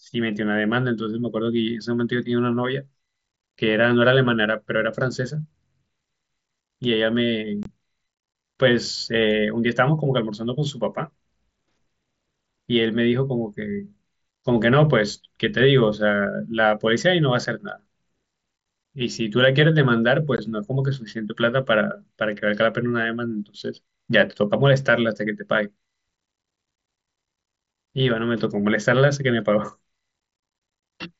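Speech carried over a wideband mSBC headset link, with content stopping near 8 kHz, breaks up in unconcealed Bluetooth headset packet loss at 7.63–7.66 s, 17.45 s and 20.37 s. Holes of about 22.5, 7.5 and 15 ms cut in abruptly and are left unfilled. Each shows as a flat gap in the waveform and a blank vertical slot on the spectrogram.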